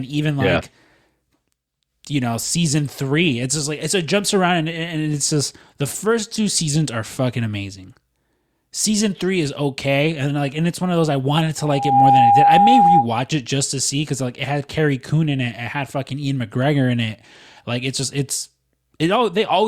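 At 11.58 s a loudspeaker feedback squeal starts in the speech. The microphone is hearing its own loudspeaker, and the loop gain passes one near 808 Hz. A pure tone swells within about half a second, ending at 13.08 s, roughly 10 dB louder than the speech.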